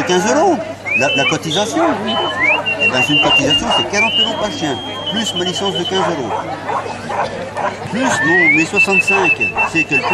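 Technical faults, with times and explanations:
4.13 to 6.54 s, feedback whistle. A thin, steady tone at 3.2 kHz sits behind the sound, roughly 15 dB below it. It swells and fades slowly in level. The likely cause is a loudspeaker-to-microphone loop poised at the edge of feedback, so it rings without growing.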